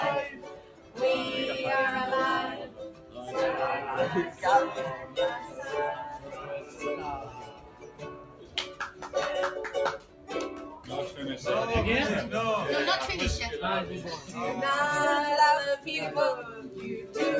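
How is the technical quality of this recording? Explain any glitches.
The recording is compromised by a speech-oriented noise suppressor working on non-speech material, which makes the level swell and sag throughout and pulls specific passages down.

Noise suppressor applied to music or sounds, across the whole clip: a processor designed to isolate voices treats sustained, steady content and its ambience as background noise and attenuates it, while sharp onsets slip through. The result is a restless, pumping level that swings by around 10 dB, with held material and decays thinning out instead of sitting steadily. The call-style capture, with nothing above 8 kHz, is heard underneath this.

Sound cut by the noise suppressor occurs at 0.37–0.98 s, 2.65–3.32 s, 4.97–5.62 s, 6.18–9.08 s, 9.98–10.9 s, 14.18–14.34 s and 16.48–17.15 s. In each span the suppressor judged the sound to be noise and clamped it harder than its surroundings, by about 9 dB at worst in most spans and about 6 dB in the last two. 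The longest dip, around 6.2–9.1 s, sinks for roughly two seconds.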